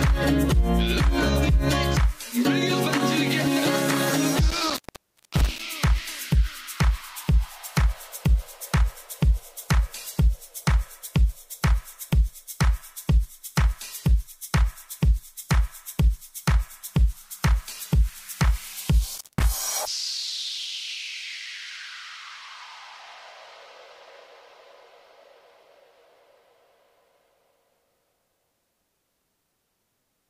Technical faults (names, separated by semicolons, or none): intermittent contact